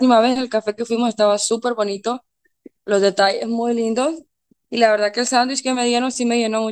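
From 0.83 s to the end, the speech has pre-emphasis left on. A treble boost applied before recording or transmission was never undone by the matching de-emphasis, so the highs stay lifted, about 11 dB at 10 kHz relative to 1 kHz, which fits the standard 50 microsecond FM curve. The result is thin and overly bright, with exaggerated sibilance and a hard, edgy top end that persists throughout.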